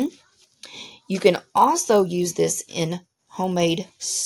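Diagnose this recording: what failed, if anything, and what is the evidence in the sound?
Sample-rate conversion failed: resampler restarted on every block, leaving edge errors every 20 ms, a 50 Hz buzz wherever there is signal, seen as spaced vertical spectrogram lines.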